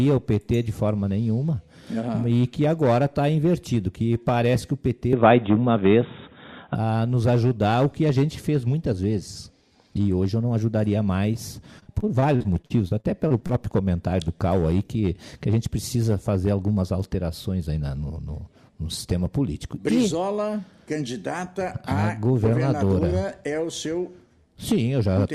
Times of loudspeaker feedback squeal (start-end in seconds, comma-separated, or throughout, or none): none